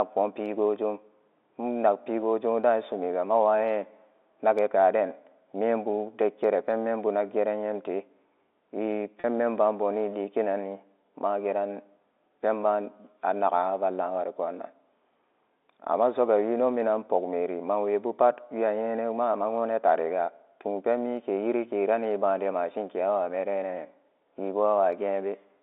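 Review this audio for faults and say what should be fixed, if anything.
Packet loss with pitch repetition at 9.20 to 9.24 s: about 40 ms of audio went missing, which fits two 20 ms packets, and the receiver filled the gap by repeating the last pitch period, giving a brief held, buzzy tone within the 300 Hz to 3.6 kHz telephone band. Preventing it means adding forward error correction or a larger jitter buffer so lost packets are recovered.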